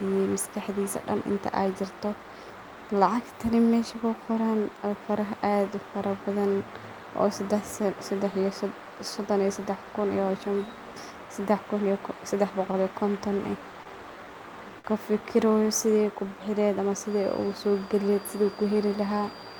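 At 12.71, 13.84 and 14.79 s, short stalls from a late packet hold the speech for about 21, 19 and 52 ms, with nothing lost. The waveform shows a briefly frozen, repeated stretch. From 17.02 s to the end, a thin, slightly wavering whistle at 4.8 kHz sits roughly 25 dB under the speech. On a spectrogram it is a steady horizontal line. This is likely a feedback whistle from a loudspeaker-to-microphone loop held right at the edge of feedback.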